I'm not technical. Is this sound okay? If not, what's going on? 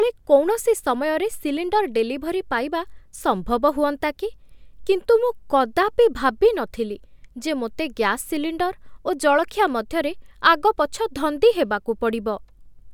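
Yes, nothing in this recording points to a technical fault, so the sound is okay.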